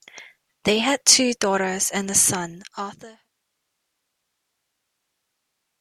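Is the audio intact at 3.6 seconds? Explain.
Yes, the audio is intact at 3.6 seconds, with no fault at that moment.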